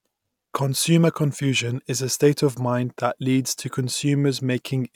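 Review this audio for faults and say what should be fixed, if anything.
No faults found; nothing needs fixing.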